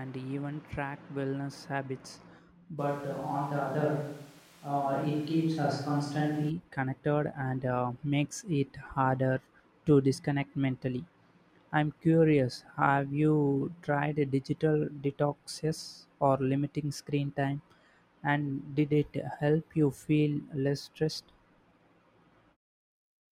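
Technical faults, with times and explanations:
2.80–6.49 s, switch to a distant microphone: the close microphone's feed likely dropped out, leaving only a pickup placed well away from the talker. The speech turns abruptly roomy and hollow, with thinner low end, because that microphone captures much more of the room's reflections and less direct sound. Loudness stays about the same, but room noise comes up to roughly 30 dB below the speech. The close sound returns just as suddenly at 6.49 s.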